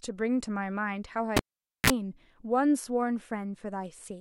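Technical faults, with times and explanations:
1.37–1.90 s, cable pulled and plugged in: a pop, about 0.48 s of near silence, then 33 ms of 60 Hz mains buzz as only the plug tip touches, and another pop as speech returns. Unlike a digital dropout, pops and buzz frame the gap.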